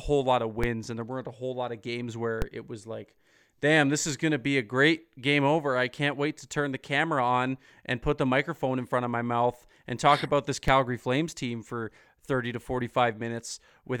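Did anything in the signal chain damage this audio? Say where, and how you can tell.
Yes. Converter DC steps of about -15 dBFS jump the zero line at 0.64, 2.42 and 10.68 s. Each is a low thump that decays through a 20 Hz high-pass.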